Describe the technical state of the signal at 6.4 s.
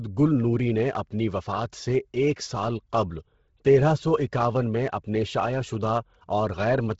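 At 6.4 s the speech carries the heavy damage present throughout the clip, likely from Bluetooth LC3 compression. Nothing sounds above 7.7 kHz, and noise fills zeroed upper bands, making the speech breathy and grainy, consistent with about 16 kbps. A spectrogram shows a hard ceiling and speckled texture in 10 ms frames.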